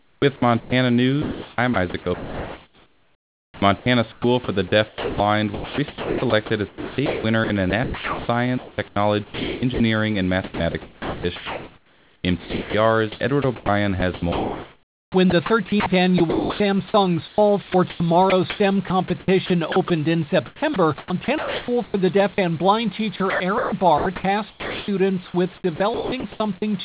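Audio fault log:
0.00–4.24, 4.88–9.80, 10.44–16.60, 17.28–19.90, 20.46–22.38 and 23.16–26.62 s, sound chopped by the voice detector: speech cuts in and out, with word edges and quiet stretches swapped for flat, synthetic-sounding hiss. About 2.5 s is lost before "for the" and 2.64 s after it. This is likely the sender's voice detector toggling transmission and comfort noise filling the gaps.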